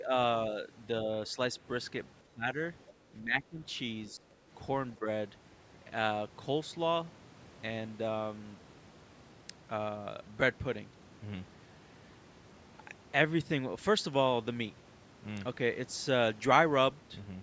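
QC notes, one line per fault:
0.0–5.07 s, speech suppressed in double talk: The speech dips five times, at 0.0–0.12, 2.26–2.47, 3.2–3.6, 4.1–4.25 and 4.98–5.07 s. The drops reach about 5, 20, 10, 15 and 10 dB. The likely cause is an echo canceller that confused the talker with far-end echo and turned both down.
2.86–2.93 s, other side's voice leaking through: A brief scrap of a second voice comes through, about 25 dB below the speech. It is likely loudspeaker echo that the echo canceller failed to remove from the microphone pickup.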